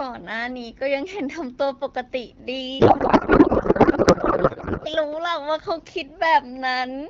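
From 2.79 to 4.88 s, a codec payload misread, consistent with octet-aligned AMR frames parsed as bandwidth-efficient, replaces the AMR-WB speech with garbled, warbling noise.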